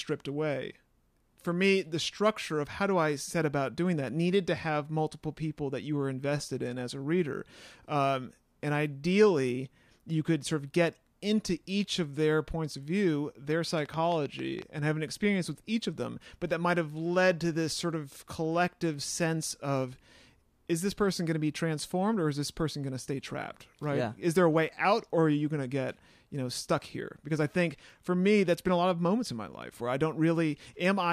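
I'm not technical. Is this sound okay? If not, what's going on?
No. There's a train of clicks between 13.52 and 14.63 seconds, just after "their points of view" and ending before "and have an experience". About ten ticks, roughly seven a second at an uneven pace, sit on top of the speech, and the clicks sound much alike. That sameness sets it apart from crackle, which is random and scratchy, and from a single pop. Likely cause: interference from nearby equipment or a faulty connection or power supply.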